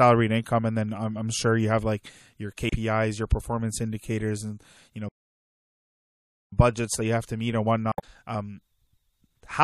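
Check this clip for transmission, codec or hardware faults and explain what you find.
Yes, there are several faults. The speech has a watery, swirly quality with dulled treble and smeared consonants throughout, most likely from MP3 compression at a low bitrate, which fits something around 64 kbps. That's the encoder cutting highs and dropping weak frequency detail that flickers from frame to frame.

Damaged data in the compressed stream shows up as short blips at 0.43 s, from 2.68 to 2.73 s, and from 7.92 to 8.04 s. Each time the decoder hits corrupt bytes, loses sync and searches for the next frame header.

There's a playback stall from 5.09 to 6.52 s, about 1.43 s of dead silence mid-flow. The likely cause is the player running out of data and going quiet until it recovers.

From 6.52 to 9.31 s you get time-compressed catch-up. The player trims its backlog by splicing out small pieces, so the speech runs about 1.1 times fast at normal pitch.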